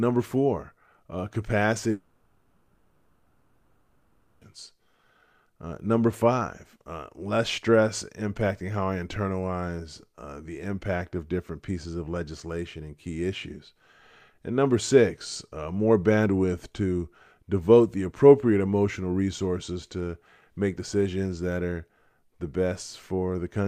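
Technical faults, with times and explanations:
1.91–4.43 s, long network dropout: For about 2.5 s the sound is replaced by a continuation of what came just before, a buzzy hiss that fades to a low steady noise floor. The audio then resumes mid-flow with that stretch simply missing. This is likely the receiver concealing packets that never arrived. On a spectrogram the last frame smears into blurred horizontal bands, then thins to faint broadband noise. The waveform shows a decaying repetitive pattern and then a sudden return to full level.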